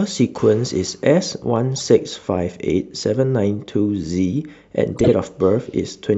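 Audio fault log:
1.76–1.81 s and 4.92–5.09 s: corrupt frame decoded. Damaged codec frames were played anyway, causing bursts that show as misplaced frame-length spectrogram blocks. The second burst is longer and louder.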